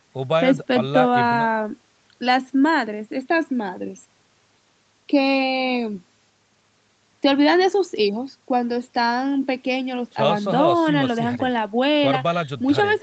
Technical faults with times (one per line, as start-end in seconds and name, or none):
none